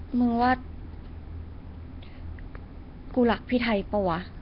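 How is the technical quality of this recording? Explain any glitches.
The technical quality is poor, with heavy codec damage throughout. Nellymoser compression, throughout the clip: the speech has a rough, hissy halo and a smeared, underwater character, with nothing above 5.3 kHz. The likely cause is Flash's old Nellymoser Asao microphone codec at a low rate, about 22 kbps. It codes short blocks with very few bits per sample, so weak bands receive no bits and are replaced with noise, producing the hiss and blur around every syllable.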